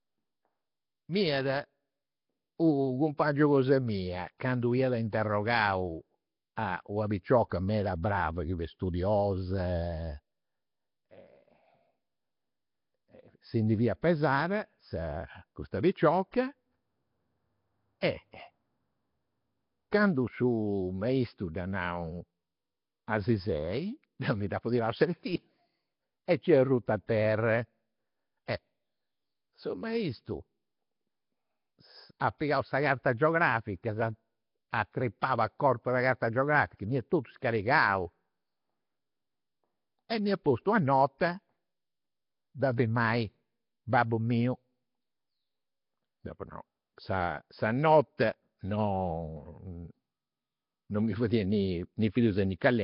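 Speech runs all the way through with a rough, hissy, underwater smear and nothing above 5.3 kHz, likely Nellymoser compression at a starved rate near 22 kbps. At 18.01 s there's pre-echo: a brief 16 ms hiss leaks ahead of a sharp attack and softens it.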